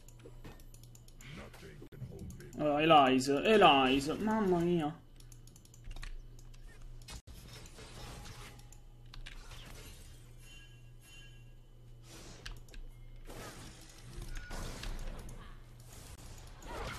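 At 1.87–1.93 s, 7.20–7.28 s and 16.15–16.18 s the sound drops out in three brief holes of 48, 72 and 24 ms, a digital broadcast dropout. The receiver lost or rejected frames and went silent until valid ones returned. The lengths fit one to three lost frames of about 24 ms each. On a waveform these show as flat gaps. A spectrogram shows full-band vertical blank stripes.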